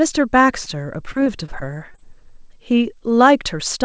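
Short concealed packet loss occurs at 0.64, 1.12, 1.24, 1.46 and 1.92 s, with a back-to-back pair at 1.92 and 1.96 s that runs to about 2.00 s. Each gap is 20 ms of audio that arrived too late to decode. The receiver bridged it by extending the preceding sound and then crossfading back, so each spot is a brief smear or wobble, and the 1.92 s pair is the longest. The sound is band-limited to 8 kHz, consistent with a wideband call codec.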